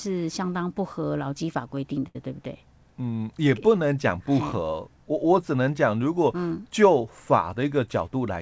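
From 2.08 to 2.16 s there is a short stall from a late packet: the jitter buffer ran dry, so the receiver stretched the last sound for about 69 ms until the packet arrived. Unlike concealed loss, nothing is skipped. The sound resumes exactly where it paused, held slightly too long with a faint buzz or dip.

From 7.86 to 8.37 s a jitter buffer speed-up trims short pitch-period pieces, cutting around 40 ms so the speech runs at about 106% speed. It sounds hurried, but unlike a resampling error the pitch stays unchanged.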